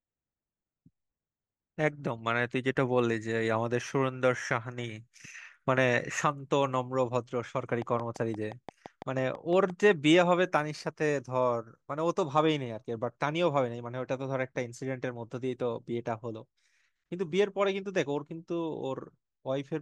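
From 7.82 to 9.71 s, a train of clicks ticks regularly at 5.9 per second, about ten sharp pulses reaching roughly 5 dB above the speech. They are likely interference, and they show as evenly spaced vertical lines on a spectrogram and as spikes in the waveform.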